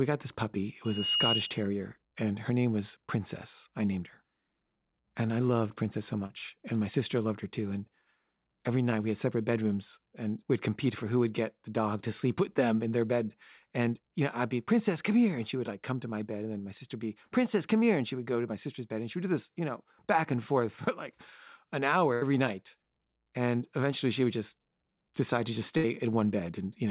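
From 0.84 to 1.68 s, just before "and her name was", there is a loudspeaker feedback squeal. The microphone picked up its own loudspeaker, and the loop ran away at 2.9 kHz. The tone swells over roughly a third of a second to a few dB above the speech. That gradual build from nothing, locked to one pitch, separates it from a whistle or test tone, which would start at full level.

At 6.26 s a short concealed packet loss leaves about 40 ms that never arrived. The receiver patched roughly 36 ms by extending the preceding sound and then blending back. It is heard as a brief smear or wobble rather than a gap.

A burst of packet loss follows at 22.14 to 22.23 s, right after "for like an hour", with about 80 ms lost. Another comes at 25.77 to 25.86 s, after "just decide to just", with about 60 ms lost. In each, the last sound is held and fades, and then the speech jumps ahead with a piece skipped.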